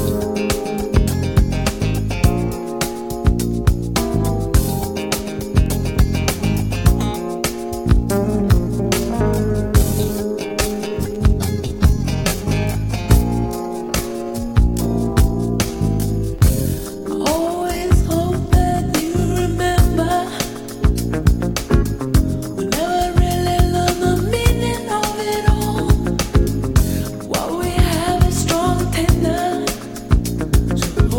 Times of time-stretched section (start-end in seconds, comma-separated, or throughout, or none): 7.84-19.94